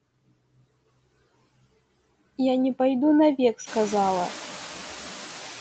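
Throughout the speech, a noise suppressor cuts bands it takes for steady noise by about 19 dB. This produces noise suppressor artifacts: the background sinks between words and resurfaces beneath them, most plainly once the room noise rises around 3.5 s.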